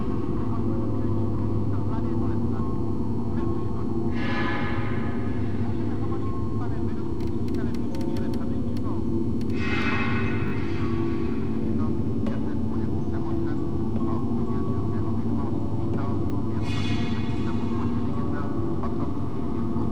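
Repeated buffer stutters at 10.48 to 10.52 s (one 20 ms block played twice more) and 16.30 to 16.32 s (once more), when audio arrived late. The spectrogram shows identical slices with hard vertical joins.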